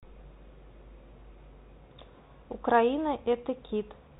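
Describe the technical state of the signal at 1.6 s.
At 1.6 s the speech is passing through a Bluetooth CVSD headset codec, a fault that runs through the whole clip. CVSD sends a single up-or-down bit per sample and adapts its step, and the damage here is plainly audible and consistent with a 64 kbit/s CVSD stream. A spectrogram would show energy cut off flat near 4 kHz, with grainy noise filling gaps. The waveform would show slope-limited edges on loud transients, heard as scratchy sibilants over a constant granular hiss.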